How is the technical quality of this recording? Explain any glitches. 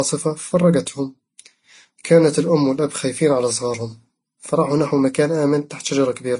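The quality is poor throughout, with compression damage that sounds stacked rather than coming from a single encode. Transcoding between lossy codecs, across the whole clip: the sound has nothing above 10.6 kHz, a dull ceiling set within the chain that no later stage can restore. Its mixture of artefacts is likely the result of passing through several low-bitrate codecs in turn, roughly an MP3, then an HE-AAC, then a Vorbis encode. Each later stage spent its scarce bits re-encoding the previous one's distortions and added its own. So the speech carries the different kinds of artefact at the same time.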